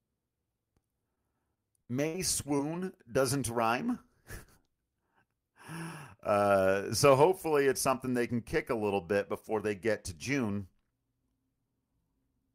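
From 1.15 to 2.89 s the speech suffers repeated packet loss, giving a robotic sound. Audio drops out five times, 160 ms in total, with the longest hole at 63 ms. Each gap is filled by continuing the preceding sound, so the stretch turns choppy.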